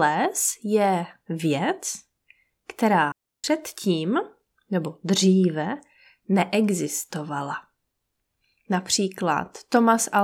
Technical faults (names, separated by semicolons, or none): digital wireless dropout